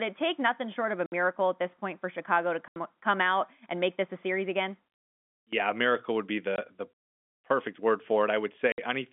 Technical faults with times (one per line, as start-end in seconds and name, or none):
1.06-1.12 packet loss filled with silence
2.68-2.76 packet loss filled with silence
6.56-6.58 packet loss filled with silence
8.72-8.78 packet loss filled with silence